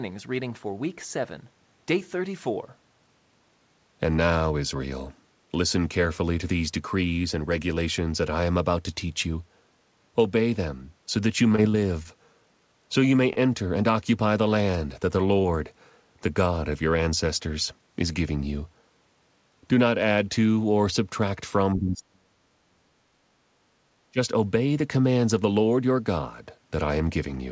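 From 11.52 to 12.07 s, repeated packet loss (robotic sound) leaves four quick gaps, the longest about 25 ms, patched with continued sound. Unlike a single loss, the recurring holes make a choppy stretch with about 40 ms missing.

At 13.33 to 13.38 s, a short stall from a late packet holds the sound for 29 ms and then resumes exactly where it left off. Nothing is lost, so it sounds like a brief drawn-out buzz rather than a gap.

At 15.42 to 15.46 s, a short concealed packet loss drops about 20 ms and fills it with extrapolated sound. Unlike the stall, real audio is gone, leaving a small smear or wobble.

Between 21.76 and 23.27 s, speech dips as deep as roughly 40 dB. This is likely speech suppressed in double talk, with the echo canceller choking the talker while the far side speaks. It is much deeper and longer than the background gating that follows.

At 23.55 to 23.59 s, background gated by the echo canceller pulls the room sound down about 6 dB for a moment. 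It is shallow.

At 24.10 to 24.19 s, a second burst of likely speech suppressed in double talk briefly knocks the voice down around 30 dB. Through the G.722 path, nothing is heard above 8 kHz.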